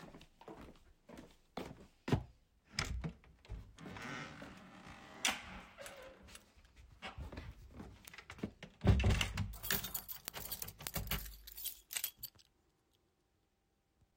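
Word clock ticks run from 0.15 s to 14.10 s. The device reading the digital input is running on its own clock rather than locking to the sender's, so the two rates drift past each other. At each crossing a few samples are misread and a single sample is dropped or repeated. That produces sharp ticks of uneven strength, around a hundred of them, at a steady rate of roughly one every 0.15 s. This points to a clock mismatch of about 150 ppm.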